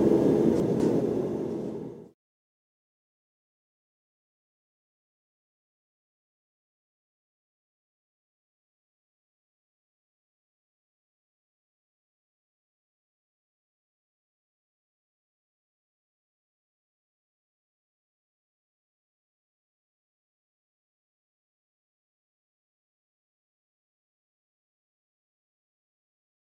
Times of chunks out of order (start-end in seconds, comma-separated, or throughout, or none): 0.60-1.00